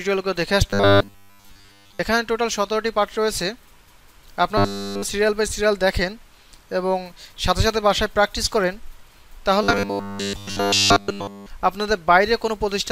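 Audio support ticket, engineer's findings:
Robotic sound from repeated short buffers at 0.70–1.99 s, 4.58–5.03 s and 9.63–11.46 s: rigid 100 Hz buzz, likely a starved playback buffer looping roughly 10 ms chunks.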